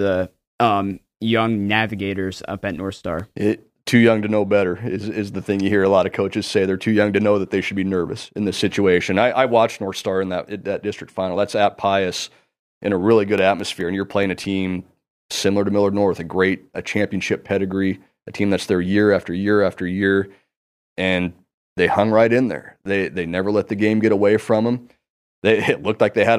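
From 2.35 to 3.41 s, six CD scratch ticks sound in a regular row. A second run follows from 13.38 to 14.66 s, with seven ticks. Both repeat at under six a second, once per disc turn. A blemish wipes out more data than error correction can restore. The player then patches or mutes the lost samples. Each tick is a tiny dropout of uneven strength, the longest lasting about 3 ms.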